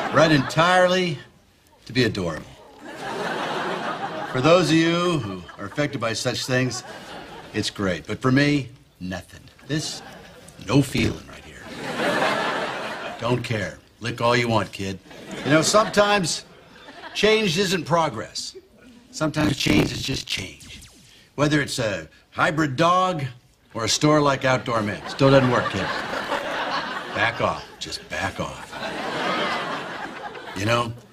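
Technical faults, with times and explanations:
2.37–2.81 s, 10.89–11.37 s, 19.38–20.42 s and 25.99–26.59 s: processor overload crackle. Each burst is a gritty tearing over the sound, made of many small breaks in quick succession. The processor missed deadline after deadline on short buffers of around 10 ms, which points to a few dozen misses per burst. Each missed slot was filled with repeated old audio with hard edges, producing the crackle. The longest burst, near 19.4 s, runs about a second.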